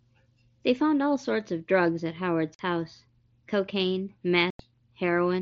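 Voice packets between headset and phone went missing over the mSBC link, with nothing filling their place. This is unconcealed Bluetooth headset packet loss. At 2.55 s the speech drops out for 45 ms, and at 4.50 s for 90 ms. Both gaps start and stop abruptly.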